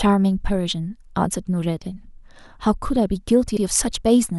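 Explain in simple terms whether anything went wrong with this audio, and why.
Something did go wrong, near the end. At about 3.57 seconds the speech briefly stutters. A tiny slice of sound, about 64 milliseconds long, plays twice in a row. This fault is called repeated frames. Compressed audio is stored in small blocks. Here a short run of those blocks was saved or sent twice, so the player repeated it. You may hear a small click where the repeat joins. The clip also runs 64 milliseconds longer because of it.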